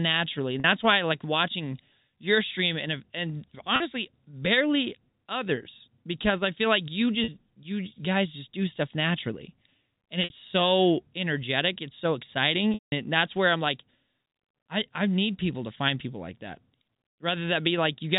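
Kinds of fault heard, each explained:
Packet loss with pitch repetition: speech packets went missing and the receiver bridged each gap by repeating the last pitch period. The 40 and 60 ms gaps sound like a brief buzzy hold; the 180 ms gap at 12.74 s fades toward silence.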